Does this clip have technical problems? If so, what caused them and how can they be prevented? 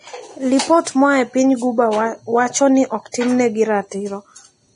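Yes. The whole recording is hissy and grainy, with nothing above 10.5 kHz, and it's likely heavy Vorbis compression at a low bitrate of around 28 kbps. Encoding at a higher bitrate or quality setting would keep the top end clean.

There's also pre-echo from 3.12 to 3.14 s, right after "piny guba wacho ni". About 23 ms of hiss smears in ahead of the attack because the codec spread its block noise backwards. A higher bitrate, or an encoder that switches to short blocks on transients, would prevent it.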